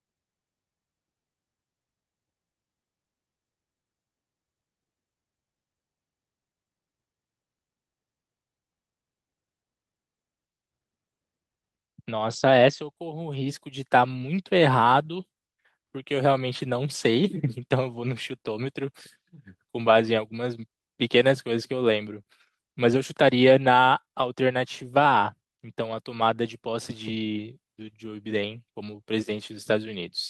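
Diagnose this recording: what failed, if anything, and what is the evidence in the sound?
Network trouble here: repeated packet loss (robotic sound) from 23.97 to 24.23 s. Five short gaps, the longest 18 ms, get papered over by stretching the last bit of audio, so about a quarter of that stretch is concealment and it turns choppy.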